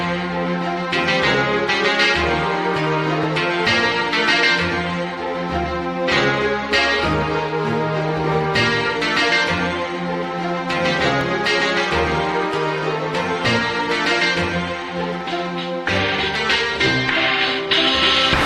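Overlap between stream segments: the audio arrives in segments about 4 s long whose time stamps overlap, so at each join the player discards a short stretch it treats as duplicated, although that sound was never actually doubled. About 8 to 17 milliseconds of audio vanish and the waveform jumps across the gap, producing a brief click or tiny skip at 3.23, 7.22, 11.21 and 15.21 s. The regular spacing of roughly 4 s matches the segment length.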